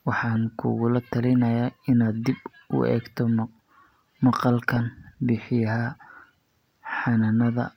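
At 4.74 s to 4.77 s, DAB burbling breaks through the speech. Weak reception let bit errors slip past the error correction into the MP2 audio data. Corrupted samples put short blips of noise into single sub-bands. The short burst points to about four frames being hit, and the error rate sounds low, around a tenth of a percent. It is heard as a few brief watery blips over the speech.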